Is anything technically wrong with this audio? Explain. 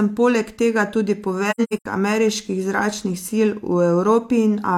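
Yes. Between 1.50 and 1.86 s, after "poleg tega tudi" and before "ameriških zračnih", the speech has AAC frame loss with muting. The decoder zeroed the spectrum of the lost frames, removing about 256 ms scattered across 340 ms, with the longest gap about a tenth of a second. Overlapping windows fade each hole out and back in, so it sounds like soft dropouts. A spectrogram shows blank full-band columns with tapered edges, and the waveform shrinks smoothly to silence.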